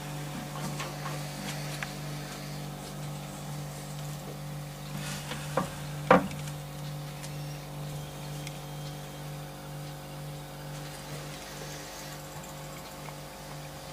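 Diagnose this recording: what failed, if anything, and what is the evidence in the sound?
Driver or buffer stage, repeated buffer at 7.93 s: a 5.33 ms block plays twice with a hard join, heard as a click, which fits a late 256-sample buffer.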